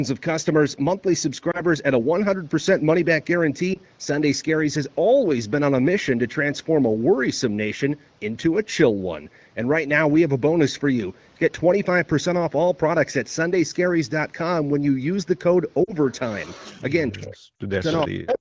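At 1.51 s and 3.74 s there are lost AMR speech frames, each a single 20 ms frame that failed its checksum after radio errors. The decoder fills the gap by repeating the previous pitch and spectral shape at reduced gain, so each one is a brief dip or slight warble. At 15.84 s and 17.56 s, two consecutive frames are lost, 40 ms each time, and the sound smears and fades a little longer before recovering. On a spectrogram these look like short smeared patches where the harmonics stay frozen, then soften.

From 16.10 to 16.82 s an echo leak appears. A faint copy of the audio returns 423 ms late at about 20 dB below the main signal, likely because a loudspeaker on one end is feeding its microphone past an incomplete echo canceller. Shorter scraps follow at 17.20 to 17.27 s (about 25 dB down), 17.86 to 18.07 s and 18.28 to 18.39 s (both about 15 dB down). A spectrogram shows the same patterns repeated, fainter, 423 ms to the right.

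Speech is suppressed in double talk from 17.12 to 17.84 s and again from 18.07 to 18.37 s. With both ends active, the canceller likely turns down both its own talker and the loudspeaker echo, with drops of roughly 40 dB at the deepest. The sound cuts out in pieces or loses its top end. The waveform pinches to near-flat segments, and upper bands vanish on the spectrogram.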